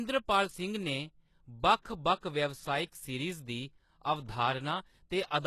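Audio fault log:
Throughout, HE-AAC compression: the treble is bright but synthetic, likely from the lower spectrum being copied upward rather than coded, so harmonics don't line up and s sounds go gritty and lispy. Nothing above 12.3 kHz, and the damage fits roughly 16 kbps.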